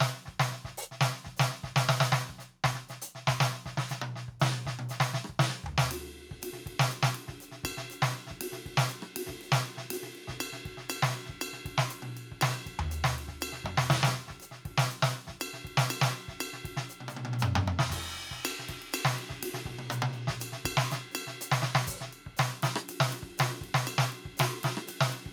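Throughout the music there is gain pumping: the level keeps sinking under each loud passage and climbing back in the quieter gaps, swinging by around 5 dB, so the whole mix sounds squashed. The likely cause is input gain set far too high, with a fast limiter or compressor clamping down on every peak. On a waveform the envelope looks flattened, with peaks held to a ceiling; a spectrogram shows the level rising between loud moments.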